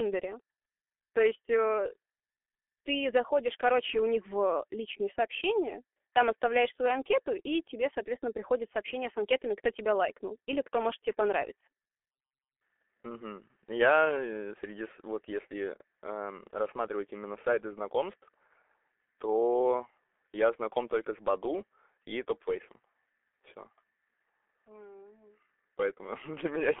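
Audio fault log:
throughout, G.723.1 codec: the speech is muffled and hoarse, with consonants smeared together and nothing above about 3.7 kHz. The slow 30 ms frame updates at roughly 6.3 kbit/s, not mere band-limiting, cause the rough, blurred quality that sets it apart from a plain telephone filter.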